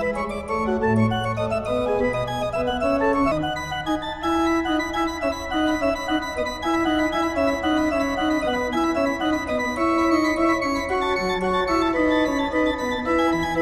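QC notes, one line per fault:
3.31–3.33 s, skip ahead: about a second of audio is missing, and the two sides are butted together with no fill. Audio that was lost on the way, or overflowed the jitter buffer, was discarded, so playback jumps forward abruptly.
3.89–5.29 s (105%), 6.40–7.32 s (115%), 8.52–8.89 s (135%), 9.56–11.92 s (107%), 12.85–13.35 s (107%), jitter buffer speed-up: the buffer held excess audio, as after delayed packets arrive together. It repeatedly cut pitch-period-sized pieces, removing about 0.6 s in total. Playback sounds hurried at unchanged pitch.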